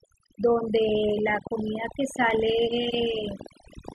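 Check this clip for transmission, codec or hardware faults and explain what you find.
Three faults can be heard in the speech.

Overdone noise removal runs through the whole clip. A noise reducer was set too hard. It pushes any frequency band near its noise estimate down to almost nothing. The quiet parts of the voice are cut along with the hiss. The pauses drop to near silence, dotted with twinkling specks. The voice loses its softer detail.

A train of clicks starts at 0.89 s and continues to the end. There are about 30 clicks, at roughly 8 per second. The spacing is uneven. The clicks share much the same sharp shape and peak at about 5 dB above the speech. They tick and pop over the voice and through the gaps alike. The likely cause is electrical interference from nearby equipment or a faulty connection or power supply.

A block of digital silence occurs at 2.31 s. It lasts 2.67 ms, which fits a 128-sample buffer that was not filled in time. 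The audio drops straight out and snaps back with no fade. Both edges produce a step in the waveform. At this length it is heard as a single small tick rather than a hole.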